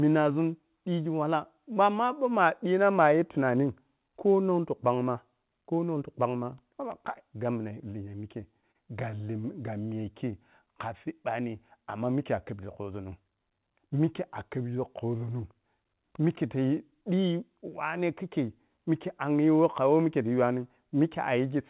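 Between 8.12 and 9.45 s the speech stutters with repeated stalls: twelve brief gaps, the longest 36 ms, where packets arrived late and the receiver stretched the last sound to cover about 136 ms in total. Nothing is lost, but the flow catches and drags in jerks rather than slowing evenly.

From 9.89 to 11.42 s, just before "amma mikke a’khebgi", a jitter buffer slow-down plays the speech at 94% speed by repeating single pitch periods, adding 94 ms to rebuild the buffer's reserve. Unlike the stutter, the drag is smooth and continuous, with drawn-out sounds at unchanged pitch.

Between 13.39 and 14.0 s a jitter buffer speed-up trims about 70 ms of pitch periods to shed excess delay, so the speech runs at 110% and sounds hurried. The pitch stays put, which separates it from a simple playback-rate change. All of this is heard through the G.711 call path, band-limited to 4 kHz.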